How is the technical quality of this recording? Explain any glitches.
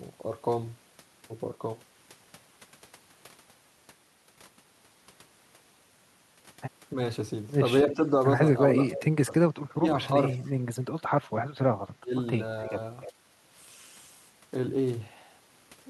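The recording has two kinds of call-processing faults in its second half.

Speech suppressed in double talk hits at 7.84–8.02, 8.91–9.29, 9.75–9.86, 12.0–12.15 and 12.70–12.76 s. The speech dips briefly, by about 5 dB at the mildest and about 30 dB at the deepest. The likely cause is an echo canceller turning down both its own talker and the loudspeaker echo while both sides spoke. On a waveform these are short notches in the envelope, and a spectrogram shows momentary vertical gaps.

Echo leak appears at 12.63–12.68 and 13.01–13.12 s. It is a faint copy of the speech delayed by 300 ms, about 20 to 25 dB below it, likely residual loudspeaker echo. A spectrogram shows weak, displaced repeats of the speech's harmonic pattern.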